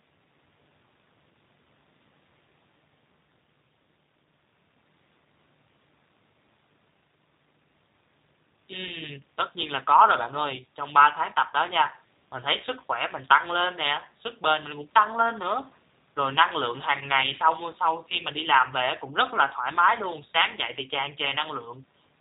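From start to finish the speech carries G.729 codec damage, which fits an 8 kbit/s G.729A stream. The codec rebuilds each 10 ms frame from a vocal tract model, a pitch predictor and sparse pulses, so nothing above 4 kHz remains, and the speech sounds plainly rough, buzzy and synthetic.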